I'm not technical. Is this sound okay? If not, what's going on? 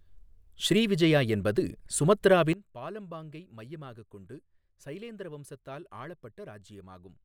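No. At 2.53 seconds there's a sudden gain jump: the volume setting inside the recording or playback chain was likely changed in one instant instead of being eased gradually. From that moment to the end of the clip, the speech abruptly becomes much quieter, as if someone snapped a volume knob down. The background noise drops at exactly the same moment, which shows that the whole signal was turned down, not just the person talking.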